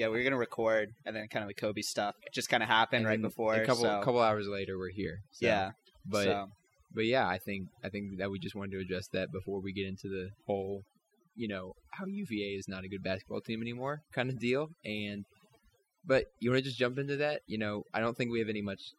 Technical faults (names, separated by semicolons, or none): overdone noise removal